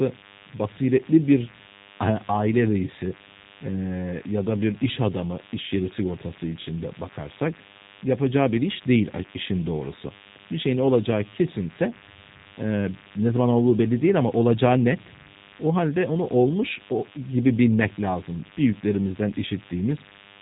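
A nearby DECT cordless phone or base station is pulsing its radio every 10 ms, and the audio circuitry is rectifying those bursts, so DECT cordless phone buzz runs through the whole speech recording as a thin, steady 100 Hz buzz rich in harmonics, sitting well below the speech, about 25 dB down. The audio has also passed through a low-rate speech codec, plainly audible G.729 compression consistent with an 8 kbit/s stream. Speech is rebuilt from a filter model and sparse pulses, so it sounds rough and synthetic, with nothing above 3.8 kHz.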